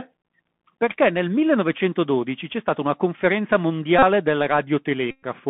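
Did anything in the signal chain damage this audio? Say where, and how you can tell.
Yes. The Bluetooth CVSD headset codec damaged the whole recording at the codec stage of the wireless headset link. The sound was carried as one bit per sample at 64 kHz, with each bit only saying up or down, and it is confined to roughly 150 Hz to 3.5 kHz. The damage is plainly audible. Fast, loud high-frequency movements outrun the adaptive step, so s sounds come out scratchy and a granular hiss sits under the speech for the full length.

A second fault, Bluetooth headset packet repeated, happened on the radio link. Voice packets were lost and the headset chip decoded the previous packet's bits again. The first burst runs from 3.99 to 4.03 s, just after "c'è stata una conferenza". It covers about 37.5 ms, which fits a run of roughly ten 3.75 ms packets. The second, longer burst runs from 5.11 to 5.24 s and covers about 120 ms. 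In both, the repetition every 3.75 ms produces a steady buzz near 267 Hz until good packets return.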